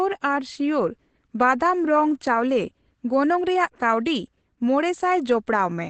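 Right from the start and through the whole speech clip, the sound is muffled and hoarse, with nothing above about 8.6 kHz. That's most likely Opus compression running very lean, at a rate in the region of 12 kbps. At that level the encoder falls back to its speech mode and narrows the bandwidth, so the top end is simply gone. The damage is heavy the entire way through.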